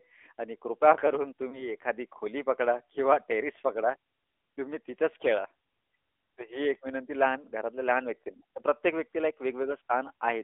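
Throughout the clip the speech has the sound of the AMR narrowband mobile codec. The band is confined to roughly 300 Hz to 3.5 kHz, with nothing above 4 kHz. The encoder rebuilds each 20 ms frame from a vocal-tract filter driven by a handful of pulses, and at this rate the damage is plainly audible: a buzzy, synthetic edge on the voice. That level of degradation fits a mid-range AMR-NB mode around 10.2 kbps.

From 1.50 to 1.70 s there is a lost AMR speech frame. The decoder's checksum failed, so it concealed the gap by repeating the previous pitch and vocal-tract parameters at reduced gain. The result is a brief dip or warble, not a dropout to silence, and the voice returns a little thin before settling. The short disturbance points to a single lost 20 ms frame.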